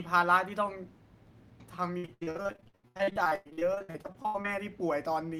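From 1.97 s to 4.46 s, the speech breaks up with repeated packet loss, giving a robotic sound. Dozens of short holes open one after another, the longest about 99 ms. Each hole is patched by stretching the last bit of received sound forward. Almost half of this 2.5-second stretch is concealed this way. The repeated patches make the speech choppy and robotic, with pieces missing.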